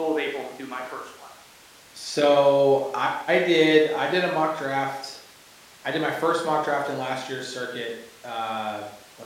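No technical faults can be heard anywhere in this speech recording. Nothing in the audio points to a problem with how it was captured, processed or delivered.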